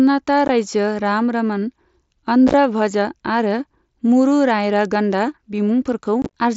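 At 0.48 s, 2.48 to 2.54 s and 6.22 to 6.29 s, unconcealed Bluetooth headset packet loss leaves hard-edged silent holes. Unlike concealed loss, nothing fills the gaps, which crackle where scattered, in 7.5 ms steps typical of the mSBC link.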